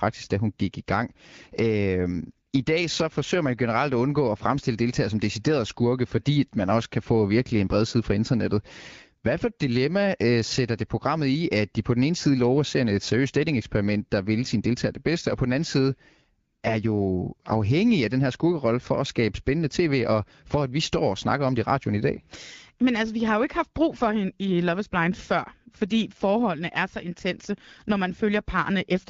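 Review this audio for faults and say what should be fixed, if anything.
Nothing here needs fixing: the speech has passed through an AMR wideband (HD Voice) codec at 12.65 kbit/s, which leaves only the light coding texture expected at that rate.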